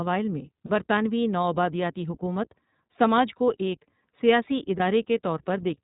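Speech coded through the iLBC codec the whole way, so it's capped below 4 kHz and sounds rough and a bit synthetic, which fits the 20 ms, 15.2 kbps mode. There are also two spots of lost iLBC frames, where the decoder fills the gap by repeating the last pitch cycle with some noise. You hear a short buzzy held vowel at 0.66–0.71 s, right before "برطانوی نوآبادیاتی حکومت سماج", and a briefer one at 4.78–4.82 s just after "سماج کو ایک سیاسی". In both spots the speech recovers almost immediately.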